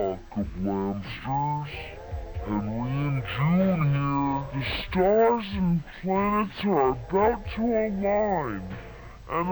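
From the very start and all the way through, you've got a stereo-read-as-mono problem. The left and right samples, which sit interleaved in the file, are being played back one after another as if they were a single channel. So everything runs at half speed and drops a full octave, twelve semitones down, giving that slow, sagging, heavy sound. There's also a fainter mirrored copy of the sound sitting up in the top half of the spectrum.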